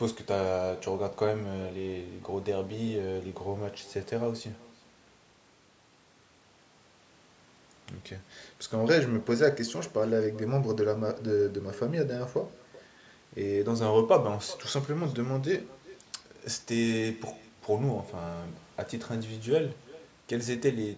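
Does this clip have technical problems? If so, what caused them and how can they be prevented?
Yes. An echo with no canceller runs throughout the clip: every phrase is trailed, roughly 0.4 s later, by a faint copy about 22 dB below the speech, thinner than the original. The far end is playing the call on a loudspeaker, its microphone captures that playback, and nothing strips it out, so the speech returns after a full network round trip. Prevent it by enabling acoustic echo cancellation on the far end's device or having that participant wear headphones.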